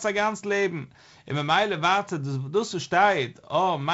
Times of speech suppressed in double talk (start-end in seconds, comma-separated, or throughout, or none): none